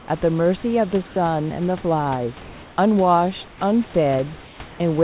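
Speech over a call path band-limited to 4 kHz, with comfort noise in place of the background during five pauses: 0.00–0.08, 2.42–2.78, 3.48–3.60, 4.44–4.60 and 4.68–4.80 s. There the room noise gives way to a steady, featureless hiss, level at 2.42 s but about 8 dB quieter at 3.48 s and about 1 to 4 dB quieter elsewhere. The likely cause is discontinuous transmission, with the receiver synthesising noise while the sender is silent.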